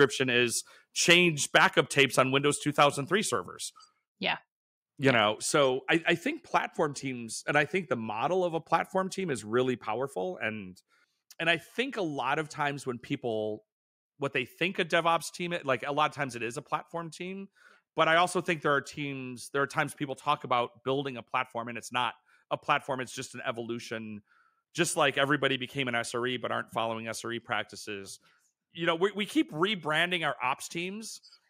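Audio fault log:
0.01–0.04 s, 1.1–1.17 s, 1.55–2.2 s and 2.79–2.84 s: microphone overload. The loudest speech peaks turn harsh and crackly, with their tops flattened by up to about 7 dB past full scale across a small share of samples. The likely cause is microphone input gain set too high for the converter.
1.14 s, 2.4 s, 3.42 s and 5.55 s: microphone volume stepped down. Speech and background drop abruptly together by about 2, 3, 1 and 3 dB. The first drop lands inside a distorted peak. The call software likely answered the overload by lowering the device's input level in single steps.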